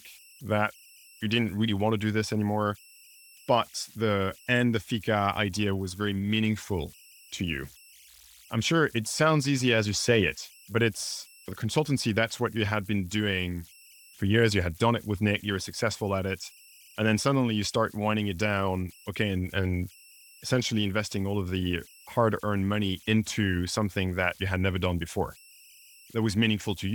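Right through the speech there are converter idle tones: an undithered delta-sigma stage locks into repeating patterns, leaving a whistle around 3 kHz, about 28 dB below the level of the speech.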